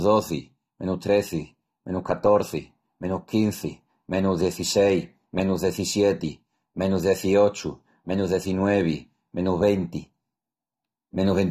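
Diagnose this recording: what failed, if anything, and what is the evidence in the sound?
AAC compression runs through the whole recording and points to the codec stage. The speech stops dead at about 14.6 kHz, and the coding damage is plainly audible: the sound is dull and smeared, with a fizzy, warbling edge on sibilants and held sounds. That fits an AAC-LC encode, likely at a low bitrate around 32 kbps. With so few bits, the encoder pulls its cut-off down and quantises each frame's spectrum coarsely, leaving thin, smeared bands.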